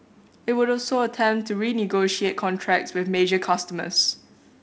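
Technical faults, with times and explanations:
No technical faults are present in this speech, so there are no times or explanations to give.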